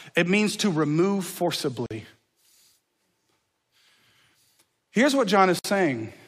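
At 1.86 s and again at 5.59 s, the speech drops out for about 45 ms and 55 ms. These are gaps at joins of encoded pieces: untrimmed encoder delay and end padding leave silence, with smeared edges.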